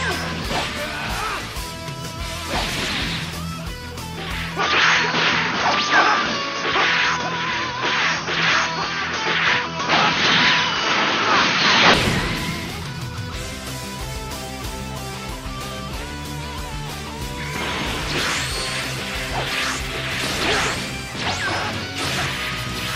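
From 4.59 to 11.94 s the sound turns dull and boxy, with nothing above 6.5 kHz, a level shift of about 5 dB and a new noise floor about 40 dB down, all changing together without a gap. That combination points to a likely input switched to a poorer device, not a simple filter or codec drop.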